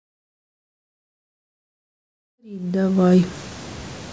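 No technical faults can be heard in this speech recording. The level rises in a smooth fade-in from around 2.5 s, reaching full level at 3.53 s with no click or hard edge.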